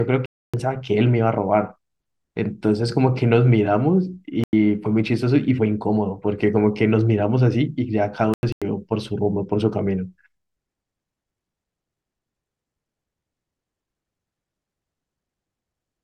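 At 0.26 s the speech drops abruptly into silence until 0.81 s. This is a corrupt frame muted fault. Damaged bits in the compressed stream made the decoder reject frames, and the player filled the gap with silence. That 0.55 s hole points to about six lost frames. A second hole runs from 4.41 to 4.53 s, and a third from 8.30 to 8.62 s. Timing stays intact after each.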